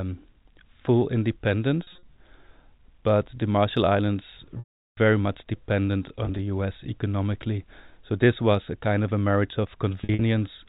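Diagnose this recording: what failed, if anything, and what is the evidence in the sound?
Packet loss with pitch repetition at the network stage: the receiver repeated the last pitch period to bridge dropped packets. Scattered losses at 1.83 s, 6.25 s and 10.01 s sound briefly held and buzzy. The 380 ms gap at 4.59 s fades to silence before speech cross-fades back.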